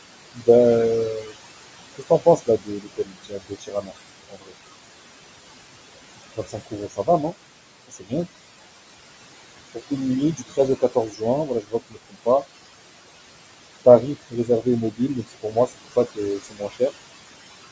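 A speech recording that's run through a call's noise suppressor, and you can hear it working hard the whole way: the background, which sits only about 12 dB under the voice, gets pulled down by roughly 21 dB in the gaps and then swells back under each phrase. That pumping of the room noise is the classic noise suppressor artifact. The leftover noise rises and sinks rather than sitting still, because the suppressor is gating bands frame by frame against a fairly loud noise floor. On top of that there's speech cut by the noise suppressor, where it mistakes quiet bits of the talker for noise and ducks them along with the background, by about 16 to 21 dB at the worst points. It happens at 0.35–0.48 s, 1.2–1.36 s, 1.95–4.54 s, 6.36–7.34 s, 7.88–8.13 s, 9.74–12.45 s and 13.85–16.92 s. The short ones near the start each swallow a fraction of a second. The long stretches lose something like a second or more of softer material in total, so word endings and gentle consonants come out faint or just vanish. 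The top end stops around 8 kHz, which is the call's mic chain doing its usual band-limiting.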